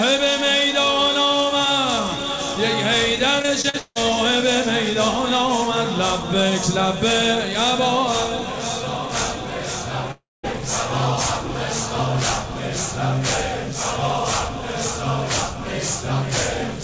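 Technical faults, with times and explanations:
3.42–3.97 s, repeated packet loss (robotic sound): packets went missing again and again, each hole patched by extending prior sound, giving a choppy stutter; longest gap 160 ms.
10.11–10.45 s, long network dropout: likely an extended network stall; a brief fading buzz or hiss fills the hole, then about 190 ms of silence, and the audio returns with roughly 320 ms lost.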